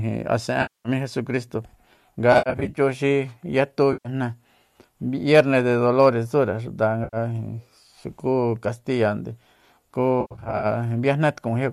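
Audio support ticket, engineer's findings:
AAC frame loss with concealment. Five dropouts in the compressed stream, each patched by the decoder from the last good spectrum. 0.62 to 0.89 s, ending just before "jesucristo nga": about 230 ms of smeared, noisy fill. 2.33 to 2.79 s, right after "jesucristo nga", and 10.21 to 10.66 s: gaps scattered over about 440 ms and 420 ms, the longest runs near 70 ms and 100 ms, giving a choppy, phasey stretch. 3.93 to 4.09 s: roughly 120 ms smear. 7.04 to 7.17 s, just after "tsure xuta": a brief 90 ms patch. Gap lengths fit roughly 10 ms frames, likely from the low-delay AAC path, whose light coding grain sits under the whole recording.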